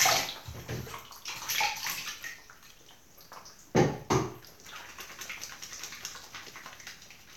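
The clip is a recording of sounds, and nothing is technically wrong with it.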